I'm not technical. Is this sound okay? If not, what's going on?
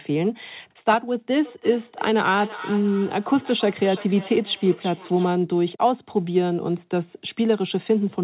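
No. From 1.45 to 5.43 s there is feedback echo between two devices: one plays speech into another's microphone, so it repeats roughly every third of a second.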